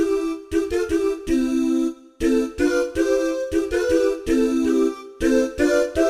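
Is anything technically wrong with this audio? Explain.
Yes. Crude rate conversion runs throughout. Repeated samples, unfiltered, suggest a 44.1 to 48 kHz step. Inharmonic fizz sits around 30 dB down.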